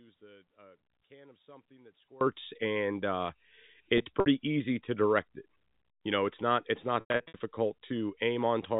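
A speech clip carried over a G.711 A-law telephone path, which limits the band to 4 kHz. An audio dropout to a faint residue is already under way when the clip opens and lasts until 2.21 s. Only a faint leak of the signal remains, roughly 25 dB below normal, and full level returns abruptly rather than fading in. The likely cause is a momentary loss of the wanted feed while the downstream path stayed live. Packet loss with pitch repetition occurs twice. From 3.98 to 4.26 s, 120 ms is lost across 280 ms with runs up to 60 ms, heard as brief buzzy, held tones where the receiver repeats the last pitch period. From 7.00 to 7.40 s, 280 ms is lost across 400 ms with a 100 ms run, long enough for the repeated period to fade into silence before speech cross-fades back.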